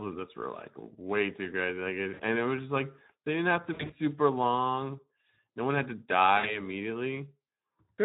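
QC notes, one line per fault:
Throughout: Speex codec. The speech was encoded with Speex at 11 kbps. At that rate the CELP excitation gets few bits, so the voice comes through noisy and hoarse, and the codec damage is plainly audible. Any band above 4 kHz is a shaped, noise-like fill rather than real detail.
2.13–2.22 s, 3.73–3.96 s, 6.37–6.59 s: VoIP packet loss concealed by the speech codec. Packets went missing, and the decoder filled each gap by extending its last pitch and filter at falling gain. The first and last gaps each lose about 60 ms, which sounds like a brief buzzy or noisy smear that fades. The middle gap loses 120 ms in bursts spread over 160 ms, the longest 60 ms. Because each decoded frame builds on the previous one, the voice stays weak or distorted for a short while after each gap ends.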